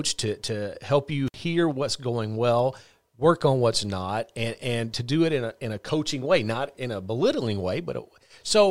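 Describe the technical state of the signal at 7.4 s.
At 7.4 s the audio is intact, with no fault audible at that moment.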